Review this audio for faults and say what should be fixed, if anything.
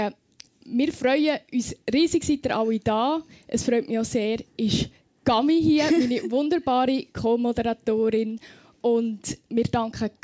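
Nothing stood out on listening, so there is nothing here that needs fixing.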